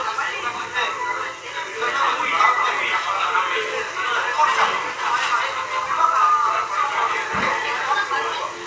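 Nothing stood out on listening to these sounds.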